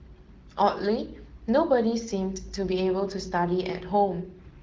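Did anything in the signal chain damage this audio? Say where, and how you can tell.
No, nothing in this speech stood out as damaged on listening.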